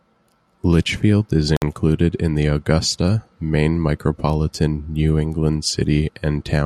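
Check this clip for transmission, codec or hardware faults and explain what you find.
There is one fault, a gap at a join of encoded pieces. From 1.57 to 1.62 s the speech drops out for about 55 ms just before "in the". Two separately encoded pieces were joined untrimmed, so encoder start delay and final-frame padding leave silence. On a waveform it is a flat hole with smeared edges. Afterwards the speech resumes where it stopped.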